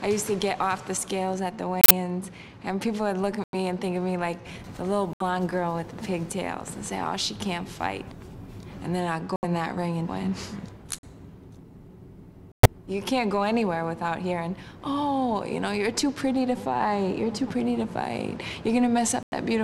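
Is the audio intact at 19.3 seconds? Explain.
No. Around 19.3 seconds, damaged compressed frames were rejected by the decoder and the player filled the gap with silence, a corrupt frame muted fault. From 19.23 to 19.33 s the sound cuts abruptly to a hole of about 0.1 s, which fits roughly four lost frames, before resuming on time.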